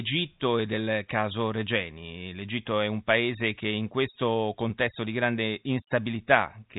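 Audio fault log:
No fault to log in this speech audio.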